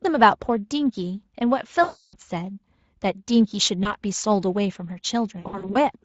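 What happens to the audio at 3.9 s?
The speech briefly smears into a buzzy tone or coloured noise that fades, from 3.83 to 3.94 s. This is VoIP packet loss concealed by the speech codec: the Speex decoder extrapolated from its last pitch and filter while lowering gain. The gap fits one lost 20 ms frame, and the voice stays weak until about 3.94 s.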